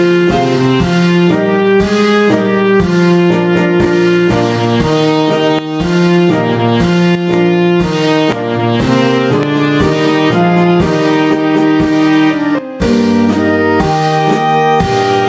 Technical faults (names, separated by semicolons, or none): gain pumping; loud pop; sudden gain jump